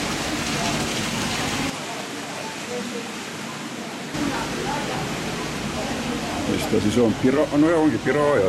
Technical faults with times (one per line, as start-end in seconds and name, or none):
1.70-4.14 input switched to a poorer device